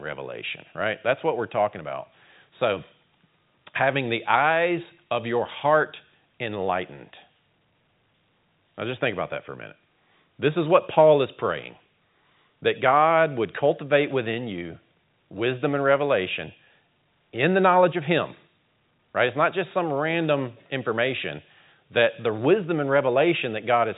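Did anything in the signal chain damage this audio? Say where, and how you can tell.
No, nothing in the chain has harmed this speech; it has simply passed through ordinary G.711 telephone coding, which is why nothing comes through above roughly 3.8 kHz, and that's the format doing its normal job.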